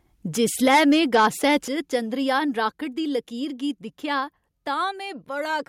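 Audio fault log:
0.43–1.56 s, microphone overload: peaks run about 8 dB past the converter limit, likely from excessive input gain, leaving flat-topped waveform peaks and crackly broadband smears on the spectrogram.
0.68 s, 1.68 s, 2.7 s, microphone volume stepped down: level drops abruptly by about 2, 6 and 3 dB, likely automatic gain correction, so the waveform envelope shrinks in steps and the spectrogram dims evenly.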